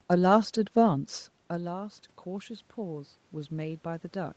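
Around 1 s the voice drops, as if the talker leaned away, and the input falls by about 13 dB. From 1.48 s to the end, automatic gain rising follows. The gain control raises its gain slowly. Voice and room noise swell together.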